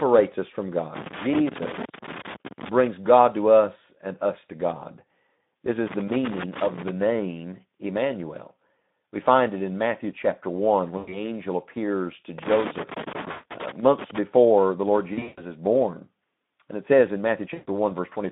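Throughout, the speech carries Speex codec damage: a hoarse, grainy CELP texture from too few bits for the excitation, which points to a low setting around 11 kbps. The band is narrowed to about 150 Hz to 3.7 kHz, and it is clearly audible. Unlike a transient fault, it never lets up.

Loose connector crackle comes in irregular bursts of scratching, from 0.95 to 2.69 s just after "us from", from 5.87 to 6.89 s, and from 12.38 to 14.18 s after "angel appears to". A contact is making and breaking, so the signal is chopped rather than smeared.

VoIP packet loss concealed by the speech codec is a different sound. From 10.97 to 11.19 s, about 100 ms is missing. The decoder extends the last pitch and filter with falling gain, which fits five lost 20 ms frames. More losses follow. At 13.31 to 13.45 s, 140 ms is lost inside the third burst of crackle. From 15.13 to 15.45 s, 200 ms of loss is scattered, with the longest run 140 ms. 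At 17.53 to 17.69 s, 140 ms is lost after "it says in". Each gap is filled by extrapolation rather than scratchy, and the voice stays weak briefly after it.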